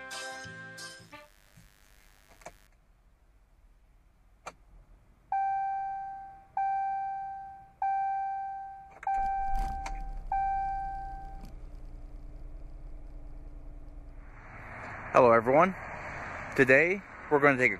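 A steady, raspy buzz sits well below the sound from 0.86 to 2.67 s: mains buzz, where switching spikes at twice the 50 Hz cycle leak in.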